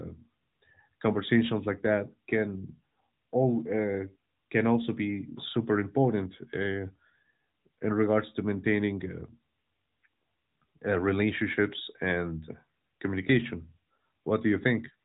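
No technical faults can be heard in the speech, which arrives through an AMR narrowband mobile codec path at 12.2 kbps that is working normally and carries nothing above about 3.8 kHz.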